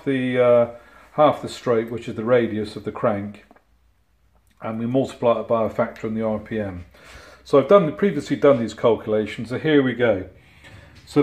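No technical faults are audible.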